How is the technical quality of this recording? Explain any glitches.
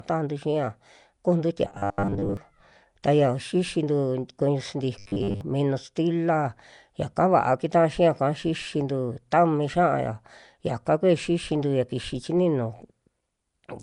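The quality is rough: there's plainly audible codec damage across the whole speech clip, and two stretches where it turns robotic.

Throughout, there's a hissy, grainy halo around the speech and a smeared, underwater feel. That points to Nellymoser compression, likely the Nellymoser Asao codec at something like 44 kbps. It codes short blocks on a tight bit budget, so quieter bands get no real detail and are filled with noise. That's the fizz you hear.

From 1.65 to 2.37 s and again from 4.99 to 5.41 s, the speech turns into a rigid, metallic buzz pitched at 100 Hz. It still loosely tracks the speech underneath. This is robotic sound from repeated short buffers, likely caused by audio arriving too slowly. The playback loops a chunk of about 10 ms to fill each gap, and that fixed repeat rate sets the buzz pitch. Most of the real audio in those stretches gets skipped.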